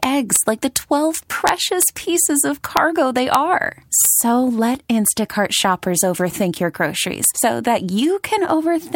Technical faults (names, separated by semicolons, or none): integer overflow